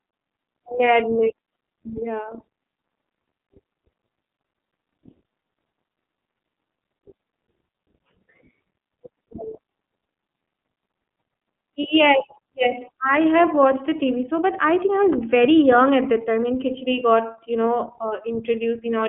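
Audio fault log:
throughout, iLBC codec: The speech is confined to a telephone band of roughly 150 Hz to 3.4 kHz, with nothing above 3.8 kHz, so sibilants and consonant detail sound dull. Each frame's excitation is coded independently of the previous one, which gives the voice a plainly audible rough, slightly synthetic texture. The frame-to-frame grain suggests 30 ms frames, which would fit the 13.33 kbps mode.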